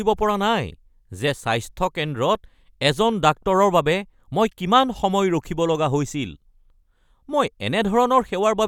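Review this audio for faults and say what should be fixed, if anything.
Nothing stood out on listening to this speech recording, so there is nothing here that needs fixing.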